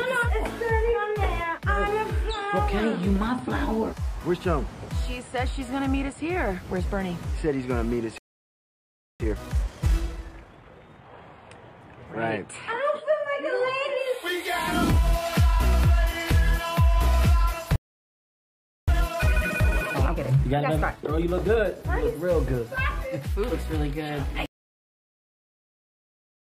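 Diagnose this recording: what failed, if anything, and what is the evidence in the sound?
Two playback stalls occur, from 8.18 to 9.20 s (about 1.02 s) and from 17.76 to 18.88 s (about 1.12 s). The sound stops mid-flow and then resumes, likely because the player's buffer ran dry or its thread blocked. Each gap shows as a flat waveform and a blank spectrogram column.

Time-compressed catch-up follows each stall, running 1.5 times faster from 9.20 to 11.22 s and 1.25 times faster from 18.88 to 21.88 s. The player trims its backlog by splicing out short pieces, so pitch holds but the audio sounds hurried. The spectrogram shows unshifted frequencies with events crowded together in time.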